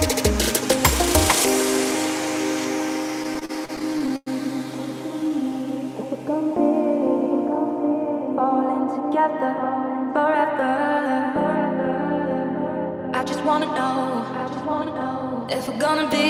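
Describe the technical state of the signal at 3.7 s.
At 3.7 s the signal is in repeated stalls (stutter), 3.23–4.28 s: fourteen buffer underruns, continued by repeating the last sound, appear as smeared, stretched spectrogram repeats and a dragging, stuttering rhythm.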